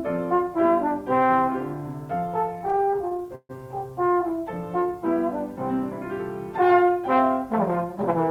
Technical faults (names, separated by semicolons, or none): repeated stalls (stutter); jitter buffer slow-down; jitter buffer speed-up